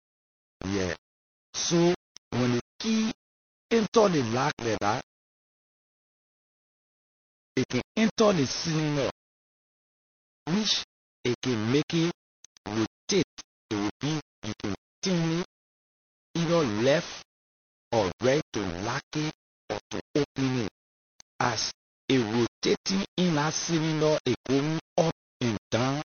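Low bit depth without dither runs through the whole speech clip. The signal seems to have been squeezed onto very few amplitude steps and rounded with no dither. The grain fits roughly 6-bit rounding, with the error sitting only around 15 dB below the speech. Because that error tracks the signal, the quieter sounds carry a rough, gritty fuzz, and the quietest decays break up and sputter between adjacent steps.

Low-bitrate audio saved at a high bitrate also spans the full clip. Nothing is present above 6.5 kHz, so the speech sounds dull and boxed-in, with the artefacts of the first low-bitrate MP3 encode still present. The sound points to a file first coded as MP3 at about 32 kbit/s and likely re-saved at 192 kbit/s. The larger second encode cannot bring back the missing top end or undo the first codec's damage.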